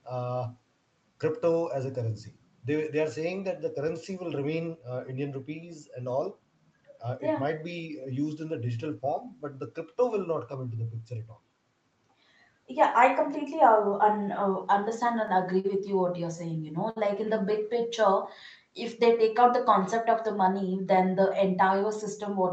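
At 15.60 to 15.66 s and again at 16.90 to 16.98 s the speech hangs briefly: a short stall from a late packet. The jitter buffer ran dry, so the receiver held the last sound for about 42 ms, then 58 ms, until data arrived, adding that much delay. Each moment sounds like a sound held too long, with a slight buzz or dip. Unlike loss concealment, speech resumes exactly where it paused, with nothing skipped.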